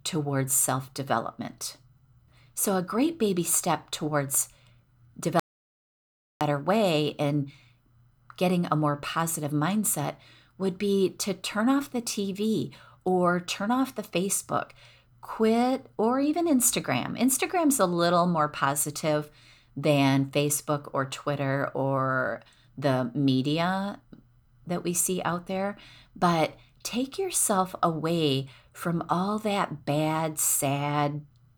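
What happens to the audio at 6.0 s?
At 6.0 s the speech is in an audio dropout to silence from 5.40 to 6.41 s, about 1.01 s of silence with no room tone, likely from input lost while recording continued. Speech returns abruptly on "way and". The waveform shows a dead-flat line and the spectrogram a fully blank band.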